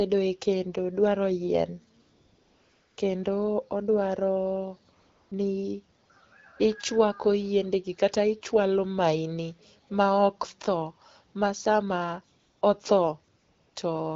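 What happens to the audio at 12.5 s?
Right around there, from 12.39 to 12.61 s, you get AMR comfort noise. For about 220 ms the phone decided nobody was talking and stopped sending speech frames, so the receiving end papered over the gap with synthetic noise built from a rough sketch of the background's level and spectrum. The real room sound drops out and a smooth, steady hiss switches in, then back out again when the wideband speech resumes.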